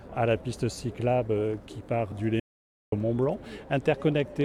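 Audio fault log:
2.40–2.92 s, audio dropout to silence: the sound cuts off abruptly and returns just as abruptly after about 0.52 s of complete silence, with no room tone underneath. The input was likely lost briefly while recording continued, writing silence, so that stretch is gone.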